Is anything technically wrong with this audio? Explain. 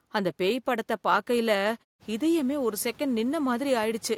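No, nothing here is technically wrong with the audio.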